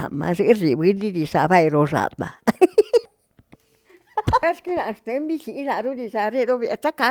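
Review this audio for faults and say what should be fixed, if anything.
Nothing to fix: no audible faults in this speech recording.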